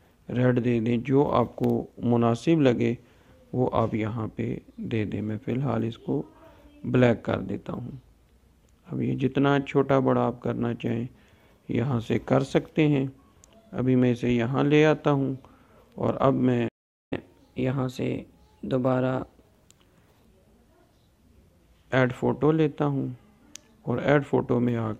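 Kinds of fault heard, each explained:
Playback stall: At 16.68 s the sound cuts off mid-flow and stays silent for about 0.43 s, until 17.13 s, most likely because the player ran short of data or its thread was held up. The waveform drops to a flat line and the spectrogram shows a blank vertical band.
Catch-up at higher speed: From 17.13 s to 20.13 s the player resamples its backlog to run 1.1 times faster, lifting pitch by roughly a semitone and a half before settling back. On a spectrogram the harmonics shift upward and events sit closer together.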